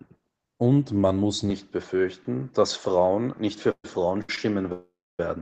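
At 1.5 s, right after "man muss", the sound turns duller with no gap or level jump, likely an input switched to a poorer device. The spectrogram shows energy ending at 7.3 kHz, over a faint new noise floor.

From 3.71 to 3.85 s comes a call audio freeze, likely from late packets: a fading buzz, then 60 ms of silence. The waveform shows a smeared tail flattening out, adding 125 ms of delay.

Short stalls from late packets follow at 4.22 to 4.30 s (66 ms held) and at 4.36 s (16 ms). Each briefly holds a sound too long, with a slight buzz or dip, visible as repeated, smeared spectral columns.

A longer freeze runs from 4.72 to 5.20 s, likely from delayed packets, inserting 467 ms that includes 270 ms of flat silence in the waveform. This comes through an Opus call path running at 20 kbps.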